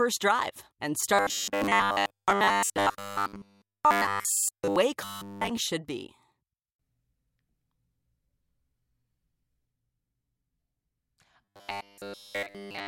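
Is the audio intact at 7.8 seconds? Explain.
Yes, the audio is intact at 7.8 seconds, with no dropout, glitch or other fault at that moment.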